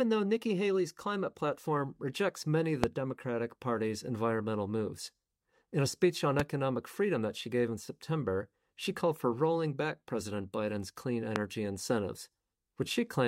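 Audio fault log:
2.84–2.86, 6.40–6.42 and 11.36–11.38 s: loud pop, one sharp click each, roughly 25, 20 and 20 dB above the speech (the first right after "platform rejects many of"), likely a sudden voltage spike. The speech carries on underneath. On the waveform each pop is a tall, narrow spike, and on the spectrogram a thin vertical stripe running the full height.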